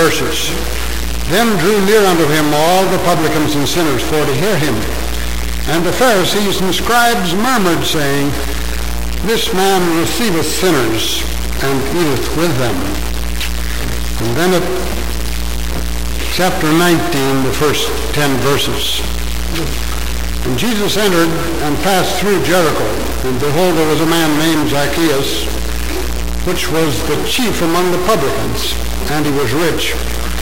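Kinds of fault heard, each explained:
stuck bit: Throughout the clip, harsh buzzy distortion sits on the sound and pauses fill with loud noise. One data bit stays fixed, likely from a broken line or converter, pushing about half the samples off by a step near -15 dBFS.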